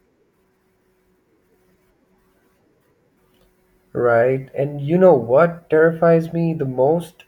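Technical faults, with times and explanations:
No technical faults detected in this speech recording.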